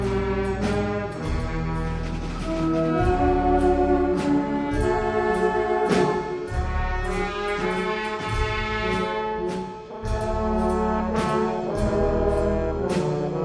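From the first moment to the end, the audio runs at the wrong sample rate. The samples are being played out more slowly than they were captured, with no conversion. Everything is slowed to about 0.69 times normal speed. Pitch drops with it, by about 6.5 semitones. The sound is low, heavy and dragging. The ratio fits audio recorded at 32 kHz and played back at 22 kHz.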